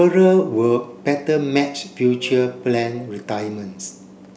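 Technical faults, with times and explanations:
No technical faults can be heard in this speech recording; the signal comes through intact, with no breaks, level disturbances or other defects at any point.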